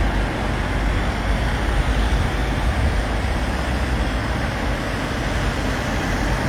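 No technical fault can be heard anywhere in this recording of everyday sound.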